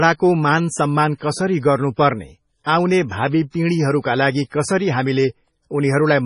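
From start to finish the speech carries heavy MP3 compression damage, most likely from encoding at a very low bitrate, which fits a rate around 24 kbps. Nothing remains above 10.5 kHz, and weak frequency components flicker in and out between frames, giving sibilants a watery, swirling, metallic edge. A plain low-pass filter would dull the top just as cleanly, but it would not produce this unstable, chirping texture.

At 2.64 to 2.66 s and again at 4.50 to 4.52 s comes pre-echo: a brief hiss, about 25 ms long, leads each sharp onset, and the attacks themselves sound softened. The codec spread its quantisation noise across a whole block, so noise meant for the loud attack leaked into the quiet moment just before it. Because the smear comes before the attack rather than trailing after it, it cannot be reverb or an echo.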